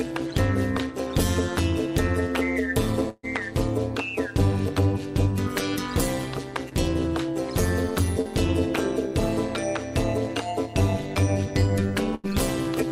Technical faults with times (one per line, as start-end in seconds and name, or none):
0.00-12.92 overlap-add ripple
3.09-3.25 burst of packet loss
12.15-12.26 burst of packet loss